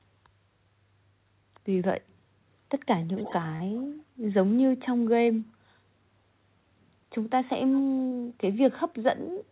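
From 3.01 to 3.33 s, and again at 3.77–3.83 s and 7.73–7.81 s, an echo leak adds a faint copy of the speech trailing by 293 ms: about 15 dB down at first, much quieter later. The likely cause is a far-end loudspeaker echo canceller letting residue through. On a spectrogram it shows as ghost harmonics offset in time.

Short concealed packet loss hits at 3.56–3.62 s (40 ms), 5.26–5.29 s (20 ms) and 8.07–8.13 s (40 ms): the decoder extrapolated the preceding sound, heard as a brief smear or wobble, and visible as an unnaturally smooth, repeated waveform patch. The whole band stops at 4 kHz, pointing to G.711 A-law.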